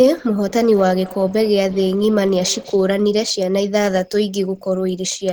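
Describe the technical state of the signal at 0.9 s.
At 0.9 s the signal carries feedback echo between two devices, running from 0.39 to 2.98 s. A second device on the call replays this microphone's sound, which is picked up again, so speech returns roughly every fifth of a second, thinner and ringing, peaking about 18 dB below the direct speech.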